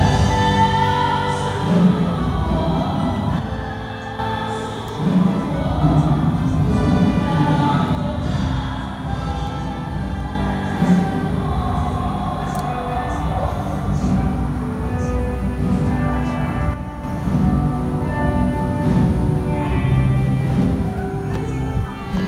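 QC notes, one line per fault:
3.39–4.19 s: one channel drops out. The sound falls abruptly by about 6 dB for 0.8 s, likely one stereo channel lost before the mono sum.
7.95–10.35 s: one channel drops out. A sudden drop of about 6 dB lasts 2.4 s, likely because one channel went silent and halved the summed level.
16.74–17.04 s: one channel drops out. A brief 0.3 s dip of about 6 dB, then full level returns, likely from a momentary loss of one stereo channel.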